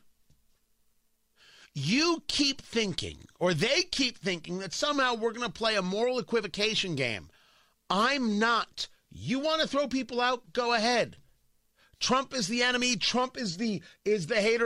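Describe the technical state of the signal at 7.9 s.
At 7.9 s the speech signal is intact, with no audible technical fault at that moment.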